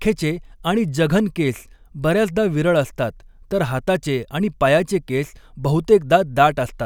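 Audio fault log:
Listening to the speech, nothing stood out as a fault at any point.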